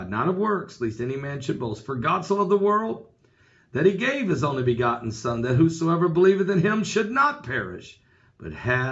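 Nothing stood out as a technical problem on listening to this clip.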